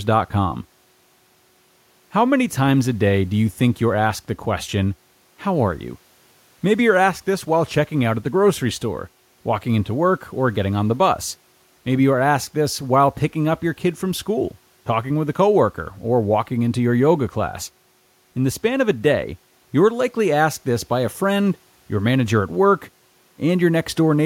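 Speech recording with no technical faults, the only background being the room's own noise sitting about 41 dB below the speech.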